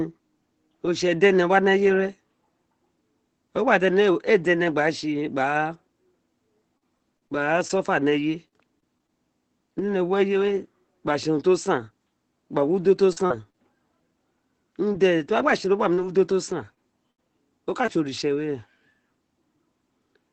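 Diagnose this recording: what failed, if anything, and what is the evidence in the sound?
Repeated packet loss (robotic sound) at the network stage: packets went missing again and again from 6.77 to 9.11 s, with holes up to 39 ms, and again from 13.13 to 13.57 s. The receiver extends the last sound into each hole, so the speech turns choppy with pieces missing.

Scattered short gaps, also network loss, appear from 14.93 to 18.38 s: about five isolated drops, the longest around 70 ms. Concealment patches each one, leaving brief hiccups and smears in otherwise intact passages, all heard through the Opus call path's roughly 8 kHz bandwidth.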